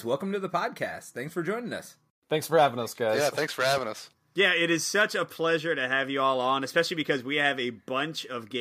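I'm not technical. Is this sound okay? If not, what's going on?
Yes, this speech recording sounds fine, with no technical problems to be heard. There's nothing going wrong here that needs explaining.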